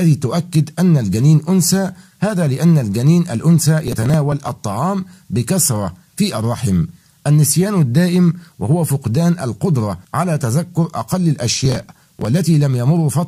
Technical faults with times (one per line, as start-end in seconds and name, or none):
3.84-4.48 processor overload crackle
11.60-12.25 processor overload crackle